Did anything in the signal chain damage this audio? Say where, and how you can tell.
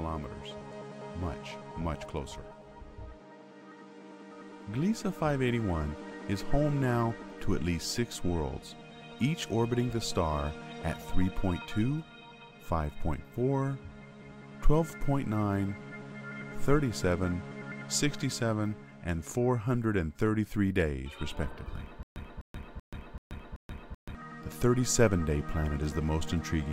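Yes. From 22.03 s to 24.15 s the audio falls into a stutter with silent gaps: a 253 ms burst of sound repeats five times, each followed by about 130 ms of dead digital silence, so it recurs every 383 ms with mechanical evenness. The cause is likely a playback or streaming buffer underrun. Each time the player retried, it replayed the last fragment it still held and then ran dry, so the audio that belonged in that stretch never arrived.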